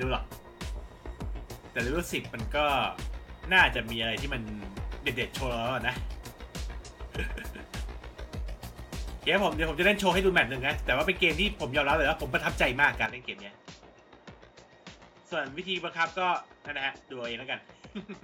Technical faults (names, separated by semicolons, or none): input switched to a poorer device